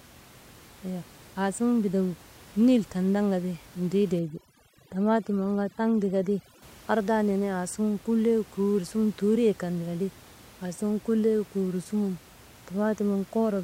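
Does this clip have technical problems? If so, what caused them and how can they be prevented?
Yes. From 4.19 to 6.62 s, just before "ardaa nenee", there is overdone noise removal: a noise reduction stage set far too aggressively cuts individual frequency bands whenever they sit close to its noise estimate, and the quieter parts of the speech are removed along with the room noise, which elsewhere sits about 25 dB below the speech. The background drops and breaks up into twinkling specks. To prevent it, use a gentler reduction setting and check the result by ear.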